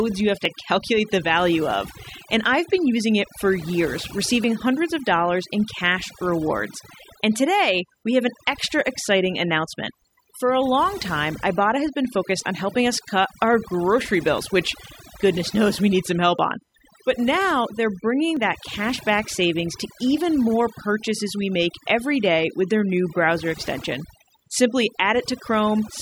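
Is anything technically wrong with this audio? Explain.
Yes, three faults are audible.

USB whine runs throughout: a steady tone on a 1 kHz fundamental, loudest at its 7 kHz harmonic and roughly 30 dB below the speech. The bus's 1 ms frame timing leaks in through power or ground, giving a thin, fixed-pitch whistle.

Overdone noise removal also runs throughout. The reduction was set too hard, so frequency bands near the noise estimate are switched off along with quieter parts of the speech. The background drops and breaks up into twinkling specks.

Overlap between stream segments causes tiny clicks or skips at 0.45, 2.45 to 2.47, 4.44, 10.41, 12.40, 14.38, 16.39 and 18.37 s. The segments are 2.0 s long, and where their timestamps overlap, the player trims a few to twenty milliseconds of real sound, so the waveform jumps.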